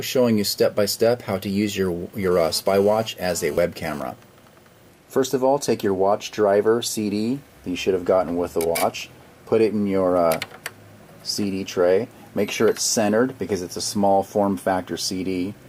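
From 2.23 to 4.00 s a hard, raspy buzz at about 217 Hz with dense harmonics sits about 21 dB below the sound, unrelated to it. This is GSM phone buzz: a nearby 2G phone's radio bursts, rectified by the audio circuit, turning on and off as data transfers.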